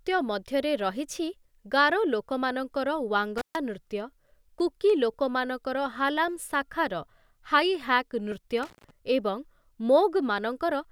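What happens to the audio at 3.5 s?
Right around there you get an intermittent contact, running from about 3.38 to 3.56 s. A loose plug or cable lets the connection open for roughly 137 ms, so the speech drops out abruptly, with crackle as the contact breaks and remakes and just faint hiss in between.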